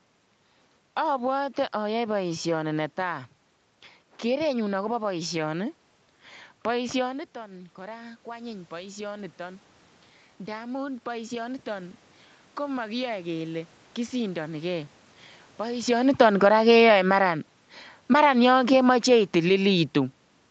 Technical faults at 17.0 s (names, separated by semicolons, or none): none